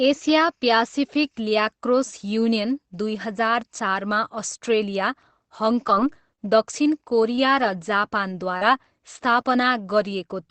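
Scattered short gaps affect this speech clip from 5.87 to 9.45 s. About four brief dropouts, the longest around 40 ms and 100 ms missing in total, were patched by the receiver extending the preceding sound, so roughly 160 ms of audio is rebuilt guesswork. Each patch is heard as a quick tick, smear or hiccup. The likely cause is packets lost or arriving late across a call path that sounds consistent with Opus at about 20 kbps.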